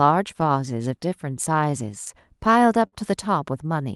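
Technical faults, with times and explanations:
Throughout: clock drift between sender and receiver. The sending device's clock runs roughly 5% slower than the receiver's, so audio arrives a little behind the rate at which it is played out. The jitter buffer keeps draining, and the receiver has to keep stretching material to avoid running dry. The result is a slightly slow, uneven pace across the clip rather than a single obvious glitch, on top of a call path whose top end stops at about 12 kHz, which fits an Opus encode.
0.06–2.78 s: repeated timing corrections. To cover the slow sender, the receiver repeatedly stretches short pieces of the speech, playing this stretch at about 96% speed and adding roughly a tenth of a second overall. The edits all go the same way but are unevenly spaced, so they are heard, if at all, as small hiccups and a faintly dragging, unsteady tempo rather than clean pitch or speed changes.
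2.87 s: short stall from a late packet. Here the buffer actually ran empty because a packet came late. The receiver held the last sound for 52 ms until the data arrived, then resumed from the same point, so nothing is lost. The held segment gives a brief frozen sustain with a slight buzz or dip, and the playout delay grows by the same 52 ms afterwards.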